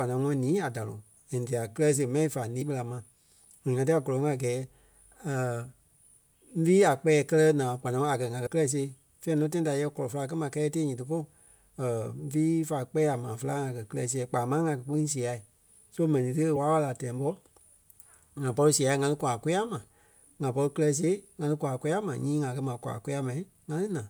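At 2.58 s, 8.43 s and 16.53 s the speech is broken by short bursts of damaged data in a compressed stream, each lasting roughly 40 to 45 ms. At each point some bytes of the encoded stream were lost or corrupted, so the decoder misread those frames, lost sync and had to find the next valid frame header. Each one sounds like a brief chirp or blip.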